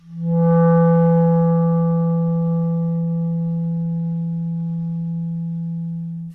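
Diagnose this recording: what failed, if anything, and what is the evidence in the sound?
Nothing in the audio points to a failure at any stage of the chain: the signal holds steady, continuous and intact throughout, with no audible disturbance to trace to wiring, conversion, buffering, processing, transmission or storage.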